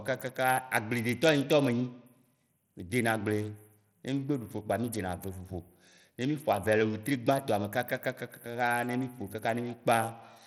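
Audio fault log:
Throughout, Bluetooth SBC compression, likely: the speech carries a plainly audible gritty roughness, with the upper treble thinning and flickering rather than cleanly rolled off, and nothing above 18.7 kHz. The grit fits a low bit pool, around 80 kbps, where the weakest top bands starve and the rest are coarsely quantised. With no hearing model to hide the noise, the grain stays exposed across the sound instead of gathering as the swirly artefacts of smarter codecs.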